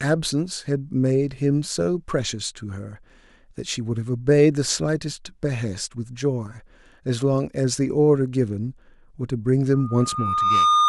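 From 9.73 s to the end of the clip, a loudspeaker feedback squeal takes over: a pure tone near 1.2 kHz rises out of the speech over roughly a second and settles about 5 dB above it. The microphone is picking up its own loudspeaker, and at that one frequency the loop gain has passed unity, so the tone feeds itself. Unlike a steady interfering whistle or test tone, it starts from nothing and swells on its own.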